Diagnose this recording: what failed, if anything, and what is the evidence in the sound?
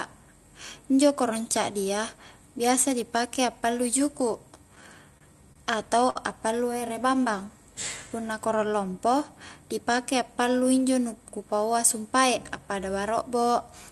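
The failure is in the network and jitter buffer stage: three short stalls from late packets in the speech, at 5.18 to 5.23 s, 5.53 to 5.57 s and 6.10 to 6.17 s. Each time the buffer ran dry, so the receiver stretched the last bit of sound for 27, 29 and then 55 ms. It then resumed where it left off, so nothing's lost, but each stall leaves a held, slightly buzzy smear and adds that much delay.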